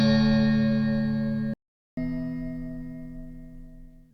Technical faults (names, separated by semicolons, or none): playback stall; catch-up at higher speed